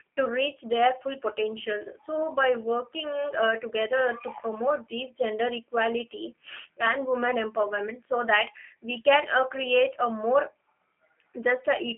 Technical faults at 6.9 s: G.729 codec

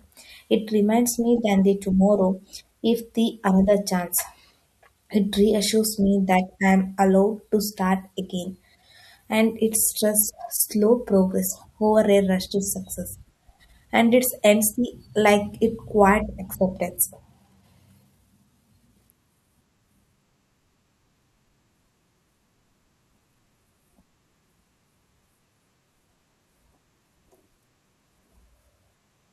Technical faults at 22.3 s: periodic USB or driver dropouts

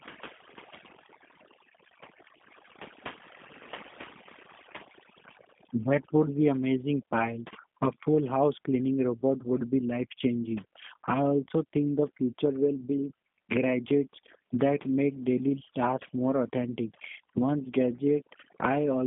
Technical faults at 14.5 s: overdone noise removal; G.729 codec

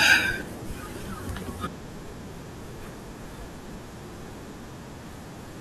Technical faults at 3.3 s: none

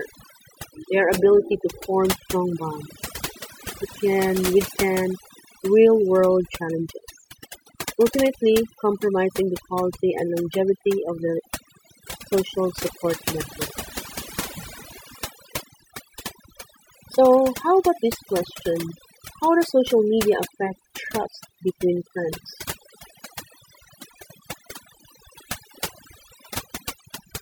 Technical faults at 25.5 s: overdone noise removal

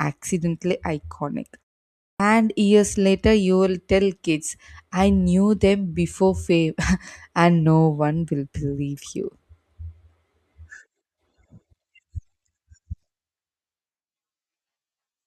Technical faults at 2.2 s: clipped start after a pause

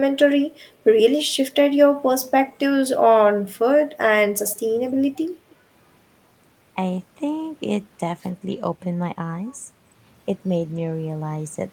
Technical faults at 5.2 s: echo leak

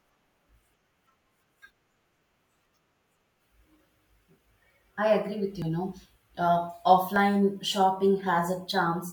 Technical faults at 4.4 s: dropped buffer (overrun)

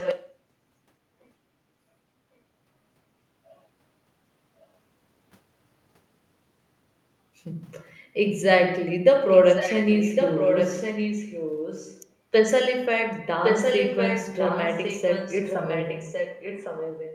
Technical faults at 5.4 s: none

